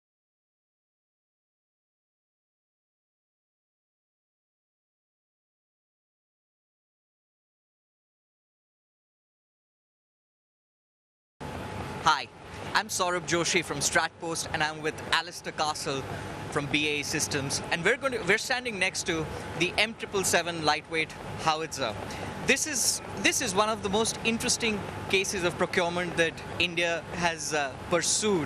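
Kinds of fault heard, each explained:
MP2 compression: The sound is dull and carries a gurgling, granular roughness throughout. Upper frequency bands drop in and out, and what remains is coarsely quantised. This likely comes from MPEG Layer II coding at a low rate, which fits roughly 80 kbps.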